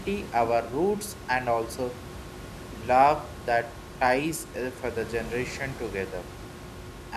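A speech recording with nothing technically wrong with it, the room's own background noise sitting about 14 dB below the speech.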